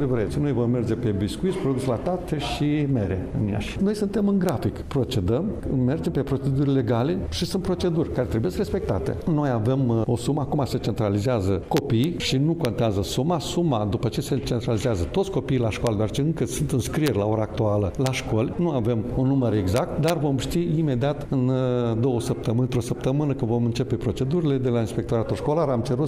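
Integer overflow occurs at 4.49 s, from 11.77 to 12.04 s, and at 12.65, 15.87, 17.06 and 18.06 s, with a final stretch from 19.77 to 20.10 s. Peaks that only just reach full scale, and exceed it by about 1 dB in the last stretch, wrap to the opposite extreme instead of being limited. Each one sounds like a harsh, violent crack, far sharper than clipping.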